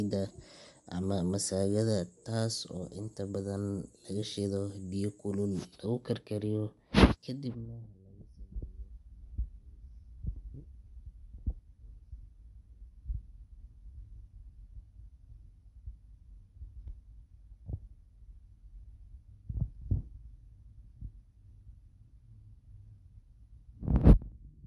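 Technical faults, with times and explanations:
Throughout: Bluetooth LC3 compression. The speech carries a plainly audible breathy, grainy sheen on the voice, and nothing survives above 11.5 kHz. This is likely from LC3 coding at a rate that fits around 48 kbps. The codec discards much of the upper spectrum and fills the gaps with shaped noise. That noise fill is what separates it from a plain low-pass filter, which leaves a clean, dull top.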